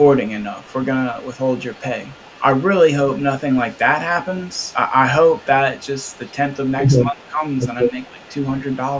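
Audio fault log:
0.01–4.73 s and 5.29–9.00 s, echo leak: A faint delayed copy trails the speech by 237 ms, about 30 dB down. The far-end echo canceller likely let residual loudspeaker pickup through.
7.05–8.2 s, speech suppressed in double talk: During overlap the talker dips by roughly 15 dB, about half a second in total. The canceller likely treats both talkers as echo.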